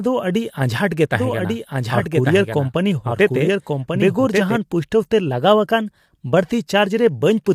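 Throughout the speech there is grainy roughness, with noise filling the gaps between harmonics and a thin, synthetic-sounding top band. This is low-delay AAC compression, likely AAC-ELD, whose short frames resolve pitch poorly; the damage fits a bitrate near 32 kbps.

From 1.14 s to 4.56 s a doubled audio track is present: a dry, full-band copy runs about a second behind the original at about 5 dB lower, starting and stopping abruptly. This is likely a second capture path or an edit holding two unaligned copies.

From 5.30 s to 6.53 s speed rises by 5.6% and pitch by 95 cents, nearly a semitone, then snaps back. This drift correction step is likely clock-matching software changing the playback rate in one jump to rebalance its buffer.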